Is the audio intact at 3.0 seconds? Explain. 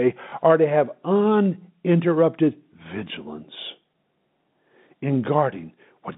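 Yes, the audio is intact at 3.0 seconds, with the speech carried cleanly through the narrow telephone band of G.711 telephone coding.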